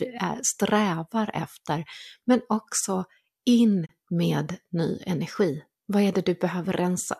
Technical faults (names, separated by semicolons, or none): digital broadcast dropout